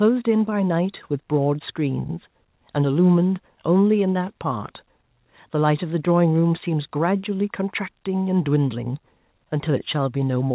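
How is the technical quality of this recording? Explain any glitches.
No audible glitches or dropouts.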